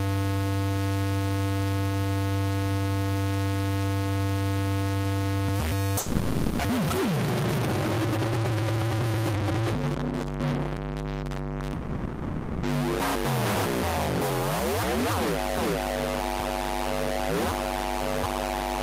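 At 5.99 to 6.61 s and again at 11.73 to 12.65 s, the sound is replaced by a buzz or hiss continuing the preceding sound, about 0.6 s and 0.9 s long, likely a long network dropout with concealment. The missing material is skipped. A spectrogram shows smeared, repetitive texture, and the waveform shows an abrupt join on resumption.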